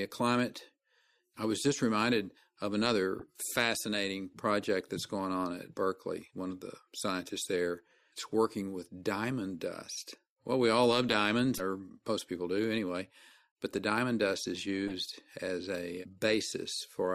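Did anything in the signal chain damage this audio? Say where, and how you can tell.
Yes, at the codec stage. Five bursts of corrupt frames were decoded and played. Short bursts land at 1.74–1.78 s, 3.19–3.23 s, 6.51 s, 11.55–11.60 s and 14.88–14.92 s. Each lasts roughly two or three frames. Most peak near about -25 dBFS. The one at 6.51 s is much fainter, and the one at 11.55 s is loudest. Flipped bits scrambled gains and spectral codes, so the decoder put energy at the wrong frequencies.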